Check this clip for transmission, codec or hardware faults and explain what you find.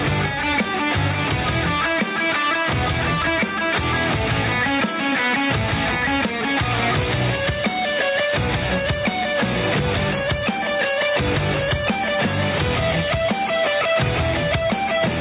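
There's one fault, and it runs through the whole clip: gain pumping. Whenever something loud comes in, the level ducks by around 5 dB, then swells back up in the gaps. The likely cause is input gain set way too hot for the microphone, with a fast limiter or compressor clamping down on each peak and releasing between them. You hear it as a squashed, breathing sound, with loud and quiet passages pulled unnaturally close together. The band also stops at 4 kHz, which fits a narrowband G.711 A-law call at 64 kbps.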